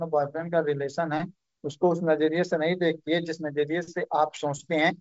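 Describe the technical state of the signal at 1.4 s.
At 1.4 s the signal is intact, with no fault present, only the normal wideband band limit of the G.722 telephone path, which leaves nothing above about 7.7 kHz.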